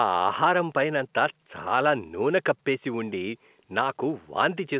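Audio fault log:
No faults heard.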